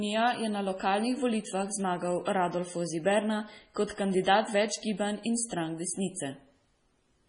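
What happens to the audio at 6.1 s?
At 6.1 s the speech carries the same heavy damage heard across the whole clip, most likely from MP3 compression. Nothing sounds above 10.6 kHz, so the top end is sliced off flat. The sound also goes watery and swirly. Starved of bits, the encoder keeps only the frequency lines it judges audible. Weaker ones drop in and out from frame to frame. S sounds turn metallic and chirpy, and attacks smear. The damage points to a very low bitrate, around 24 kbps.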